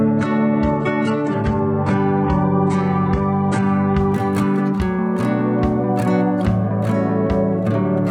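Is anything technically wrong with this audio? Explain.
Yes. Adaptive stream starting at a low bitrate, 0.0 to 4.0 s: the player opened on a lean version of the stream for a quick start, then stepped up after measuring the connection. Until 4.0 s the music has nothing above 11 kHz and heavier codec artefacts, pointing to a very low-bitrate HE-AAC stream, then improves abruptly, with no gap.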